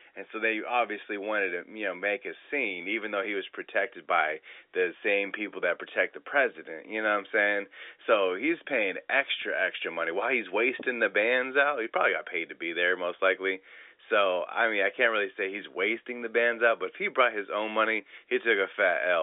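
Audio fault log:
Nothing in this speech needs flagging; it's just ordinary telephone-line audio from G.711 A-law coding, with the sound sitting in the usual band from roughly 300 Hz to 3.6 kHz.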